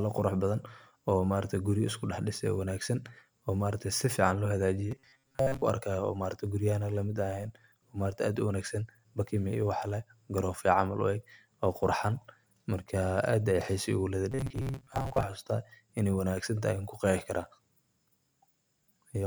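From 4.91 to 5.62 s, and again from 14.32 to 15.23 s, the speech collapses into a rigid, metallic buzz near 134 Hz that only loosely tracks the words. This is robotic sound from repeated short buffers, likely caused by audio arriving too seldom, so the software loops a fragment of roughly 7.5 ms to fill most of each stretch, skipping the real signal and imposing that fixed pitch.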